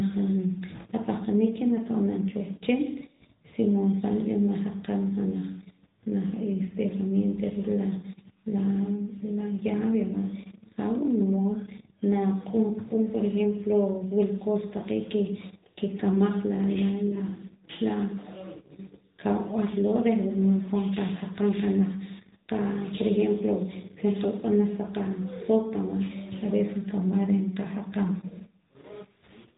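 From start to finish, the speech has passed through the AMR narrowband mobile codec. Nothing above 4 kHz survives, so it sounds boxed-in and thin. The vocal-tract model adds a plainly audible buzzy, synthetic edge, which fits a mid rate near 10.2 kbps.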